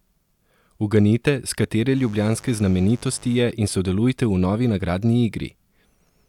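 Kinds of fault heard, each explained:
Mains buzz: from 1.93 s to 3.43 s, right after "s katere", a raspy buzz sits under the speech for one and a half seconds, roughly 25 dB below it. Sharp switching spikes from a dimmer, rectifier or unshielded line get into the signal twice in each 50 Hz cycle, giving a 100 Hz pulse train whose harmonics stretch well into the kilohertz range. That is why it sounds harsh and buzzy rather than like a smooth hum.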